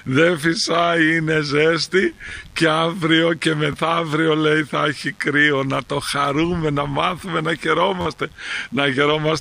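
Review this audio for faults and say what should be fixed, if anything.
Mains buzz runs throughout. Sharp switching spikes from a dimmer, rectifier or unshielded cable enter the signal twice per 50 Hz cycle, producing a raspy buzz rich in harmonics, sitting about 35 dB below the main audio. Prevent it with proper shielding, grounding and isolation from dimmer circuits.

Repeated buffer occurs at 2.29 to 2.31 s, at 3.73 s, and at 8.01 to 8.06 s. Each time, fresh audio arrived late, so the last 11.6 ms chunk, which fits a 512-sample buffer, replayed with hard joins. It repeats twice extra at 2.29 s, once at 3.73 s and four times at 8.01 s, heard as brief clicks or buzzy stutters. These repeats replace short stretches of the audio, roughly 20, 10 and 50 ms. Prevent it by enlarging the buffer or reducing processing load so audio always arrives on time.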